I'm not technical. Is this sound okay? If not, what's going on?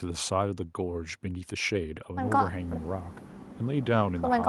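Yes, this sound is okay, and there's nothing going on with it that needs fixing.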